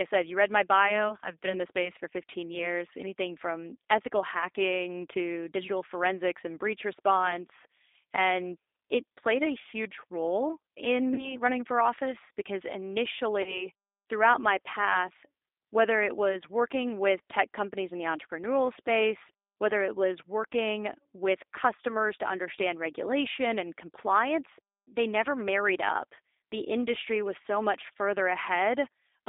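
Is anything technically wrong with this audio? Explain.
Yes. Throughout, the speech carries G.729 codec damage: an 8 kbit/s model-based coder rebuilding it as a rough, synthetic telephone sound, with the spectrogram empty above 3.7 kHz and below 300 Hz.

VoIP packet loss concealed by the speech codec occurs at 11.14 to 11.35 s, between "a huge role in" and "running for office because", and at 13.42 to 13.69 s, before "throughout my path whether". Each time about 40 ms of audio vanished, which fits two lost packets. The decoder extrapolated into a fading buzzy tone or coloured noise, seen as smeared harmonics and a dipping waveform envelope that recovers slowly.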